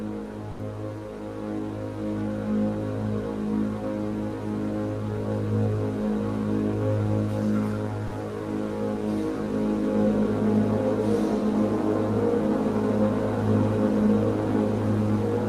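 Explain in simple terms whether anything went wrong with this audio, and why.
Twice, at 0.51 s and 8.07 s, the sound briefly drops out for a split second. That's likely sound dropped by the voice detector, which mistook real audio for background.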